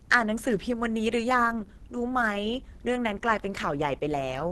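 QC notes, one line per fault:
Throughout: likely Opus compression. The speech is hoarse, grainy and muffled, with nothing above 12.1 kHz, which fits hybrid-mode encoding at around 16 kbps.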